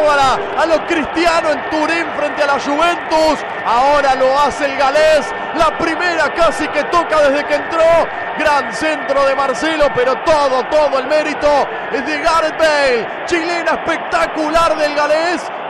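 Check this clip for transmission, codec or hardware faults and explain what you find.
Nothing audible points to a transmission, codec or hardware fault anywhere in the clip.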